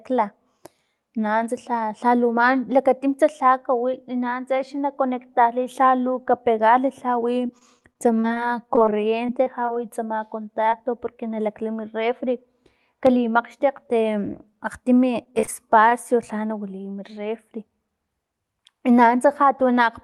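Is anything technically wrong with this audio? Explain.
Yes. The speech has three kinds of fault, all typical of a real-time call carried over an Opus link whose audio band stops around 12 kHz.

Repeated packet loss (robotic sound) occurs from 7.47 to 9.78 s and again from 15.24 to 15.93 s. In each stretch, audio packets keep arriving late or not at all. The receiver covers each hole by extending the preceding waveform, and another hole follows before the speech recovers. The first stretch has a run of short dropouts, the longest about 40 ms, with roughly 12 percent of that span synthesised. The second stretch is denser, with about 16 percent filled and gaps up to 27 ms. Both stretches sound choppy, with fragments of syllables missing.

Short concealed packet loss occurs at 10.70 to 10.74 s. About 20 ms of audio failed to reach the decoder in time. The decoder bridged it with roughly 22 ms of extrapolated signal, continuing the pitch of voiced sound or shaped noise for unvoiced sound, then crossfaded back into the real stream. 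The result is a brief smear or wobble, and any short consonant in that instant can drop out.

A loud pop occurs at 13.07 to 13.09 s. A single sharp transient peaks at about 10 dB above the surrounding speech, and the speech continues underneath it. The likely cause is a voltage step added to the signal, for example from a plug or switch contact, a static discharge or a driver glitch. The downstream circuitry shapes that step into a short pulse, which is heard as one distinct pop.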